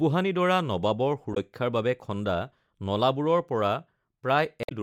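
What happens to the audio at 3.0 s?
At 3.0 s the speech carries on intact, with no dropout, click, distortion or other fault at that moment.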